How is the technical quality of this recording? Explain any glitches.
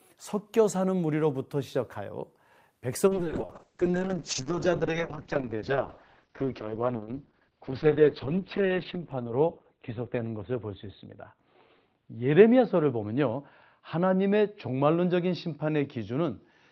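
The recording is degraded from 3.08 s to the end by a call bitrate drop. The encoder's budget fell from 48 kbps to 6 kbps, bottoming out for 5.8 s, and its bandwidth shrank from 20 kHz to 4 kHz. The speech loses its high end and turns coarse and muffled, with no recovery before the clip ends.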